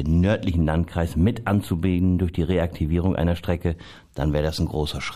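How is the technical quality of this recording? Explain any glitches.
The recording has one clear fault, a channel delay causing comb filtering, from 0.51 s to 3.75 s. In that stretch one channel arrives roughly a tenth of a millisecond late, which fits a lag of only a few samples, and the two are summed to mono. The first cancellation lands around 5 kHz, with further notches at regular intervals above it, so the speech turns thin and phasey, losing some upper presence. A spectrogram shows dark horizontal bands at fixed frequencies; the waveform looks slightly smeared.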